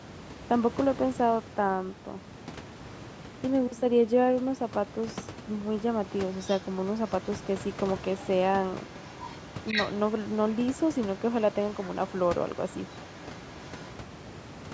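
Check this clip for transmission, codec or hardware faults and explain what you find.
One fault turns up, repeated through the latter part of this speech clip. Other side's voice leaking through appears at 6.34–7.29, 8.1–8.28, 8.81–11.2, 11.52–11.98, 12.15–12.27 and 12.45–13.9 s. It is likely an echo canceller failing to remove loudspeaker playback from the microphone, leaving a faint second voice roughly 15 to 35 dB under the talker, loudest in the longest stretch from 8.81 to 11.2 s. Room noise sits about 14 dB below the speech.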